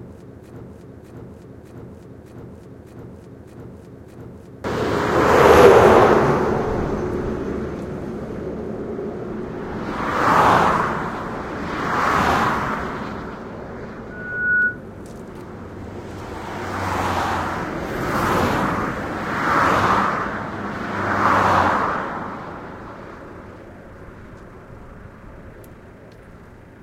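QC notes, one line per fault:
0.00–4.64 s, broken-record loop: already under way at the start, a 0.61 s fragment repeats seven times back to back, likely a stalled stream resending its last buffer.
14.10–14.80 s, loudspeaker feedback squeal: a single 1.5 kHz tone swells over roughly 0.4 s to about 5 dB above the sound, because microphone-to-loudspeaker loop gain exceeds one there.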